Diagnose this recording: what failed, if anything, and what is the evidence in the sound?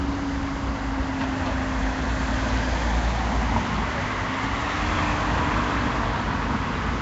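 Nellymoser compression runs through the whole clip, placing the failure at the codec stage. The sound has a rough, hissy halo and a smeared, watery texture, and nothing is present above about 7.8 kHz, which fits a low bitrate around 32 kbps. The likely cause is the old Flash microphone codec, Nellymoser Asao. It spends a fixed, small bit budget on short blocks, so weak bands get no bits and are refilled with noise, producing the grainy smear.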